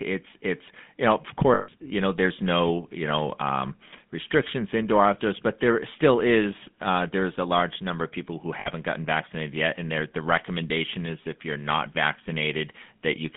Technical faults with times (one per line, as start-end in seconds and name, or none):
0.00-13.37 GSM full-rate codec
1.54-1.69 lost GSM frames
8.60-8.68 lost GSM frames